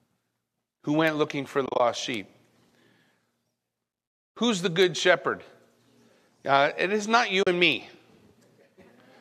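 Speech, carrying four bit error spikes and two stretches of AAC frame loss with muting. The spikes fall at 1.07 s, just before "looking for", and at 2.14 s, 4.82 s and 7.72 s. Each is a single sharp tick from a flipped bit that throws one sample, or three at 2.14 s, far off by a power of two. On a waveform each shows as a lone vertical needle, and on a spectrogram as a thin full-height line unrelated to the voice. The frame losses come after "looking for", from 1.66 to 1.80 s, and after "it is not", from 7.43 to 7.47 s. There the decoder zeroed the missing spectra, and the overlapping windows fade the sound out and back in. The first gap totals about 90 ms scattered across 140 ms, with the longest run around 30 ms, which fits nine lost frames of about 10 ms. The second loses 40 ms. A spectrogram shows these as blank vertical bands with soft edges, and a waveform shows the envelope tapering to silence and recovering. 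The slight graininess in the voice is likely from light low-delay AAC compression (AAC-ELD) at a moderate bitrate.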